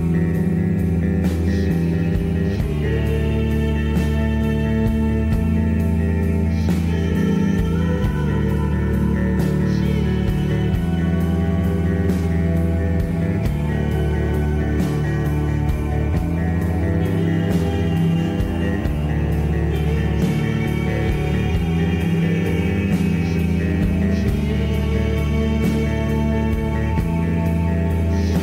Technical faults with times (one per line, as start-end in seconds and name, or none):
none